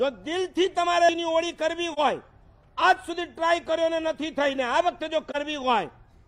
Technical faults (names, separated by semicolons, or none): AAC frame loss with muting